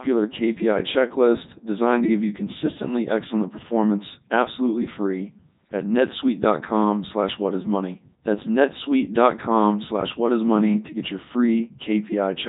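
Speech clip passed through the Codec 2 vocoder throughout, heavily damaged. The voice is resynthesised from sine waves, sounding buzzy and robotic, with nothing above 3.8 kHz, consistent with 3.2 kbit/s operation.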